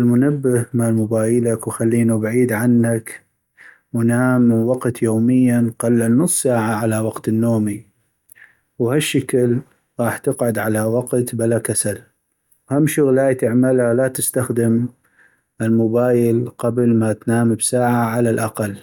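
No technical faults are audible anywhere in it.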